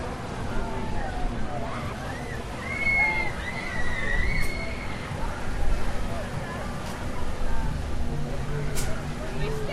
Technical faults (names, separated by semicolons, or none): none